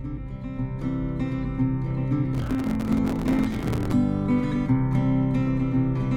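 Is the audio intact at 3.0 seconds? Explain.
No. At 3.0 seconds the audio is inside a burst of processor overload crackle running from 2.35 to 3.92 s. The processor keeps missing its deadlines for buffers of roughly 5 ms, around a hundred of them, and each miss replays a scrap of old audio with hard edges, heard as a gritty tearing crackle over the sound.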